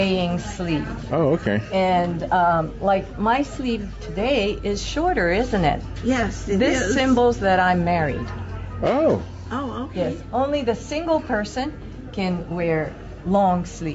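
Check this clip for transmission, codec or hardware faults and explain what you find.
One fault runs through the whole clip: gain pumping. The gain swings by roughly 5 dB, leaving the sound squashed with loud and soft parts pressed close together. This is likely caused by input gain set far too high, with a fast limiter pulling it down on each peak. The call path's band limit, with nothing above 8 kHz, is normal here.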